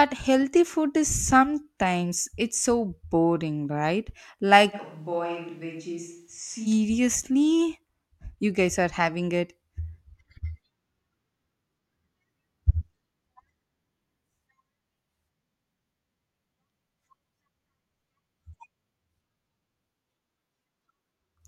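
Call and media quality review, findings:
4.75–6.65 s: speech abruptly goes roomy and hollow, bass thins, level falls roughly 10 dB, room noise sits about 35 dB under speech, then snaps back. Likely switch to a distant microphone: close-mic feed dropped, farther pickup substituted.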